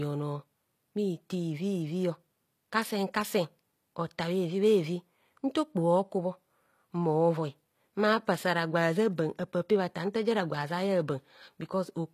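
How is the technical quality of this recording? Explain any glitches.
The speech is audibly degraded by compression throughout. For the whole clip, s sounds are gritty and lispy, with nothing above 14.9 kHz. The likely cause is HE-AAC compression at a bitrate near 24 kbps, which rebuilds the treble from copied lower bands.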